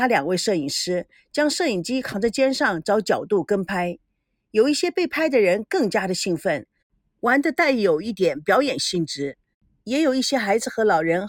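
No technical faults are audible.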